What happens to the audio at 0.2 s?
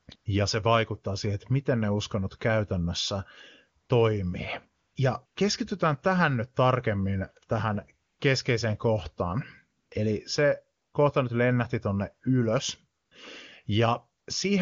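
The real background drops out briefly and is replaced by a steady, smooth hiss from 0.15 to 0.25 s. This is AMR comfort noise: for about 100 ms the phone treated the moment as silence and sent no speech frames, so the receiver synthesised filler noise from a rough level-and-spectrum description.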